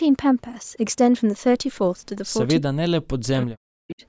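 From 2.6 to 4.03 s, speech suppressed in double talk dips the voice, dropping it by around 40 dB for about a second overall. This is likely an echo canceller ducking its own talker along with the loudspeaker echo, and the waveform shows sharply lowered stretches.

At 3.37–3.42 s, an echo leak adds a faint copy delayed 343 ms, some 20 dB under the speech. On the spectrogram it appears as a short, dim repeat of earlier harmonic bands, with nothing above 8 kHz.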